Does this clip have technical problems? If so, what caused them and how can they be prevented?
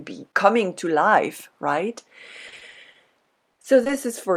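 Yes. Repeated packet loss (robotic sound) runs from 2.47 to 3.91 s, starting just after "coming to life right". Packets went missing or arrived late again and again. There are 13 gaps, the longest 50 ms. The decoder patched 270 ms by extending the last sound it had. Another 160 ms was simply lost. About 19% of the stretch is concealed. The speech comes out broken and robotic. A larger jitter buffer, a more stable network, or forward error correction would prevent it.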